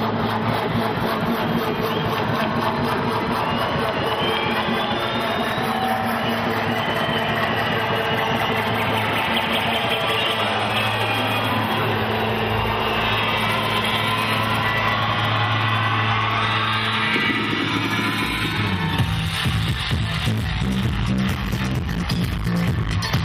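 Nothing in the audio stood out as a technical problem on listening.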